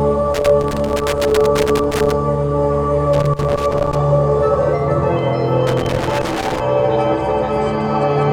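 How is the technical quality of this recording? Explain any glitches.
The recording is marred by loose connector crackle in three bursts: 0.34 to 2.14 s, 3.13 to 3.97 s, and 5.67 to 6.60 s. A worn or dirty contact in the signal path is making and breaking as it shifts, chopping the audio on and off and adding pops from any DC on the line. It sounds like irregular scratching that clusters in bursts. That separates it from the steady, evenly scattered ticks of surface noise or the isolated single clicks of digital dropouts.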